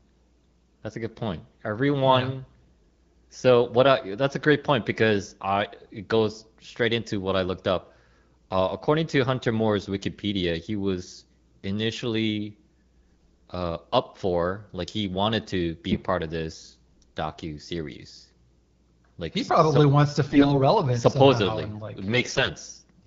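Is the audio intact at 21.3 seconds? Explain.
Yes, the audio is intact at 21.3 seconds, with the speech coming through the AMR wideband (HD Voice) codec at 12.65 kbit/s.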